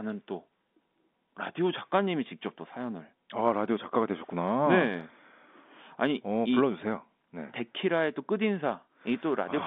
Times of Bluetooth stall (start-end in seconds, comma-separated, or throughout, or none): none